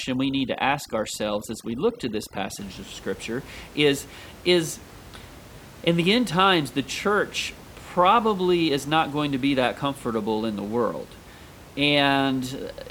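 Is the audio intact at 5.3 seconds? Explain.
Yes, the audio is intact at 5.3 seconds, with the room noise sitting about 21 dB below the speech as part of the recording rather than any fault.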